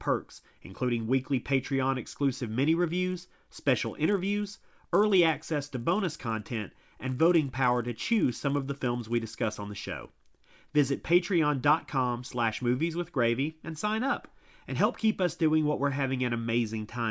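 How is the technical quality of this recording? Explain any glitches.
Quality is compromised by one fault. From 2.96 to 10.96 s, a resampler restarted on every block. Each 10 ms block was converted in isolation, leaving a small error at every block edge. These edges repeat at 100 Hz and form a buzz that rides under the speech only while it sounds, during a 24 kHz to 16 kHz conversion.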